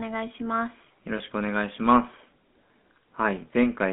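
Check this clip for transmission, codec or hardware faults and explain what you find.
Two problems show up here: the whole clip has been through a GSM full-rate codec, and there's one short dropout from lost GSM frames.

From start to finish the speech has that GSM full-rate codec grit, and the damage is plainly audible. This is the original GSM phone codec. It models the vocal tract and drives it with a regular pulse train, keeping just a third of the excitation samples. That thinned excitation gives voices a buzzy, gravelly edge. The band sits at roughly 200 Hz to 3.5 kHz, so there's no air up top. All of it fits a 13 kbps full-rate link.

At about 1.18 to 1.21 s there's a brief hiccup from lost GSM frames. When a frame arrives bad, the decoder reuses the settings from the last good one, so the sound briefly hangs as a rough, metallic ring instead of moving on. It's short enough that it doesn't fade to silence, and the length points to a single lost 20 ms frame.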